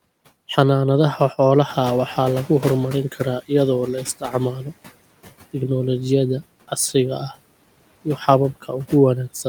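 At 1.68 s the noise suppressor is caught out when room noise jumps by about 11 dB around one and a half seconds in. Its noise estimate takes 1.73 s to catch up, so the background passes through under-reduced, then sinks by about 12 dB by 3.41 s, just before "iyadoo la".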